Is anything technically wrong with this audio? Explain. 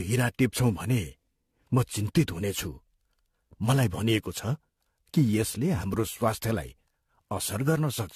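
Yes. Generation loss runs throughout the speech, likely from around seven successive AAC re-encodes at roughly 64 kbit/s, each re-quantising on a shifted frame grid. The result is swirly, hollow and smeared, with blurred attacks and nothing above 14.1 kHz.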